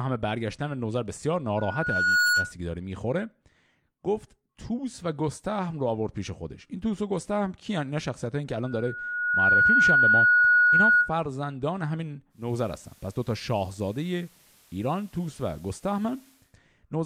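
A speech recording with two kinds of fault. Loudspeaker feedback squeal appears from 1.57 to 2.53 s and again from 8.64 to 11.14 s. A single 1.4 kHz tone swells over under a second, then about a second, ending roughly 10 dB above the speech. The microphone is hearing its own loudspeaker, and the loop gain exceeds one at that frequency. From 12.29 to 16.56 s, a digital radio blends to analogue FM. The cross-fade takes 0.3 s. The level stays the same, but hiss rises to roughly 35 dB below the speech.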